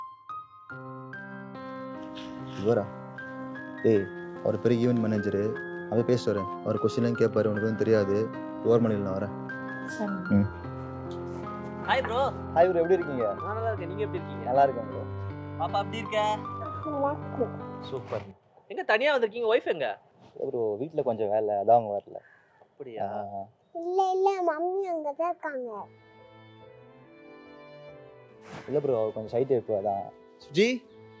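No technical faults are audible.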